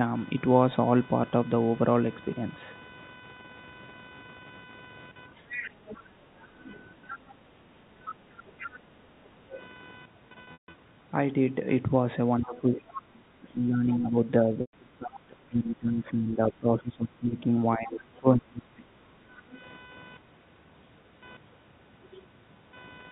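Computer activity noise runs throughout the speech as a buzzing pattern pulsing around 500 times a second, well below the voice. It follows processor or peripheral load on a shared ground, not the talk. Other side's voice leaking through appears at 5.36–6.76 s, 8.07–9.59 s, 12.43–13.0 s, 17.86–17.91 s and 19.54–19.58 s as a second voice, most likely loudspeaker playback that the echo canceller left in the microphone. Background gated by the echo canceller spans 5.87–9.52 s, and again 19.19–19.54 s: room sound dips by about 9 dB while the canceller clamps the microphone, then recovers. Packet loss with pitch repetition hits 10.44–10.74 s, where 210 ms went missing across 300 ms (longest gap 150 ms), and 14.61–14.73 s, a 120 ms loss. Each sounds like a repeated tone fading into silence before the speech returns. Speech suppressed in double talk covers 12.43–18.91 s. The talker's voice sinks deeply, likely because the canceller turned both sides down during simultaneous talk. 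The band-limited telephone tone comes from G.711 coding, which sounds clean.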